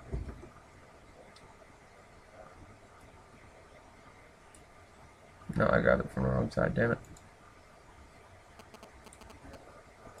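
From 8.59 to 9.55 s, a galloping dit-dit-dit of short 217 Hz buzzes sits roughly 15 dB below the main sound. These are GSM signalling bursts: a nearby 2G phone briefly talking to the network, its radio pulses rectified by the audio circuitry.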